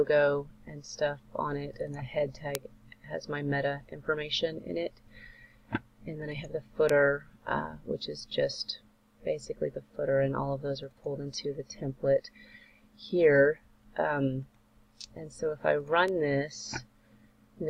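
Bit error spikes at 2.55, 6.89 and 16.08 s (about -6, -12, -24 dBFS): flipped bits cause sharp ticks, seen as needle spikes and thin vertical spectrogram lines.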